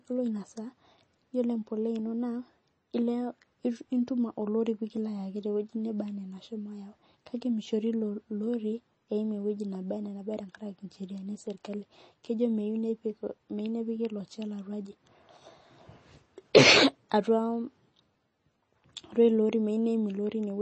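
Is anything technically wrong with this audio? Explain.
Yes. MP3 compression artefacts run through the whole clip, likely from encoding at a low bitrate that fits roughly 32 kbps. Nothing in the speech reaches above 8.3 kHz, because an encoder short of bits drops the treble at a fixed cutoff. It also discards quiet frequency components that come and go from frame to frame, so the damage is plainly audible as a watery, swirling quality, with metallic chirps on s sounds and smeared consonant onsets.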